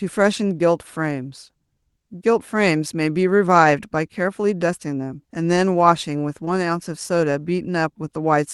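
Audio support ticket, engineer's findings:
Short concealed packet loss at 3.13–3.17 s and 6.45–6.49 s: brief smear, about 20 ms missing, bridged by continuation, which fits jitter buffer/decoder concealment. Waveform shows a repeated-cycle patch; spectrogram shows smeared harmonics, top near 12 kHz from the call codec.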